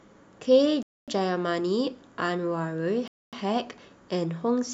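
A speech recording interrupted by a gap between chunks. Silent holes appear at 0.83 to 1.08 s and 3.08 to 3.33 s. Each lasts 250 ms. They recur every 2.25 s, which fits 2-second chunks joined with padding or late playback starts. No sound is lost.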